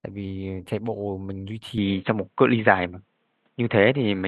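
Speech that turns dull and boxy at 1.78 s through to the end, with nothing above 4 kHz, a level shift of about 5 dB and a new faint noise floor, with no gap at the switch. That points to a likely input switched to a poorer device, not a simple low-pass filter.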